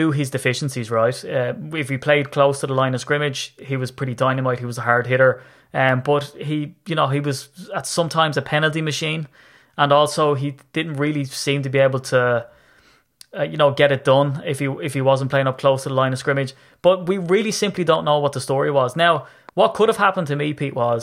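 From 17.89 to 19.50 s, a train of clicks sits over the speech. About five similar pops arrive at an uneven pace, around 2.5 per second. They peak roughly as loud as the speech itself. Electrical interference or a faulty connection is the likely source.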